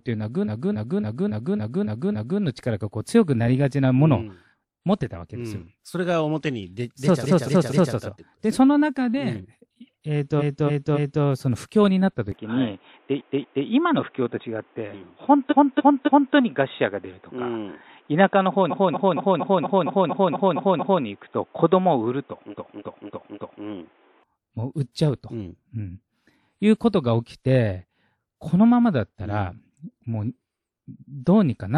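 Repeated frames first appear at 0.44 to 2.39 s, then at 7.22 to 7.92 s and 10.38 to 11.22 s. A short block of compressed speech, 278.6 or 232.2 ms long, replays several times back to back. That length fits a run of five or six codec frames. Each replay is a stutter. On the waveform, identical blocks repeat, and the spectrogram shows the same pattern tiled along the timeline.

At 12.32 s the speech turns dull and boxy with no gap and no jump in loudness. This is likely an input switched to a poorer device. Until 24.23 s nothing appears above 3.8 kHz, shown as a flat ceiling on the spectrogram, and a new noise floor sits about 40 dB below the speech. The stutters continue inside this stretch at 13.17 to 13.63 s, 15.49 to 16.33 s, 18.69 to 21.02 s (ten extra plays) and 22.50 to 23.62 s.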